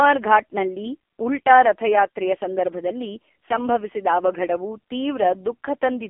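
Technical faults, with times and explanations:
Throughout, AMR narrowband mobile codec: the speech sits in a thin phone-line band, roughly 300 Hz to 3.4 kHz, with nothing above 3.6 kHz, so the top and bottom are gone. The codec models the voice as a vocal-tract filter fed by a handful of pulses per short sub-frame, and here the damage is heavy, giving a buzzy, synthetic edge that points to one of the lowest AMR-NB modes, around 5 kbps.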